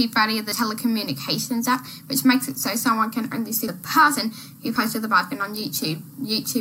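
At 3.68 s the sound jumps at a likely dropped buffer (overrun): about 70 ms of sound is skipped, and unlike a dropout, no silent gap remains.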